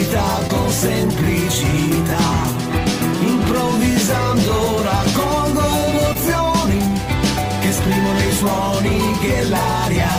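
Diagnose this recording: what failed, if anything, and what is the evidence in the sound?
Packets failed to arrive in time on the network, causing short concealed packet loss at 0.47–0.51 s and 6.13–6.17 s, each a 20 ms gap. The receiver patched each hole by extending the preceding sound, then blended back, leaving a brief smear or wobble.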